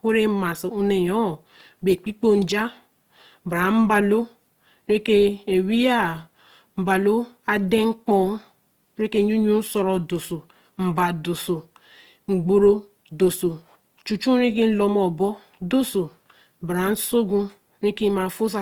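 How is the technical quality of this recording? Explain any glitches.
The recording carries audible codec damage from start to finish. Throughout, the speech has a grainy, rough texture, with noisy fuzz where clean detail should be. This is likely Opus compression in its music (CELT) mode, at a rate that fits around 24 kbps. The encoder preserves each band's energy but fills starved bands with folded or noise content. Bandwidth stays full, reaching about 20.3 kHz.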